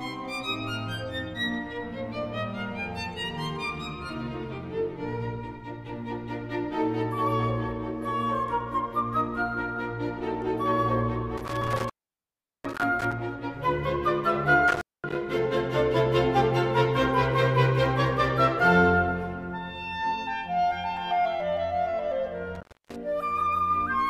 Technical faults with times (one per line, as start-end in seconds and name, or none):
11.37-13.13 intermittent contact
14.68-15.15 intermittent contact
22.55-22.96 intermittent contact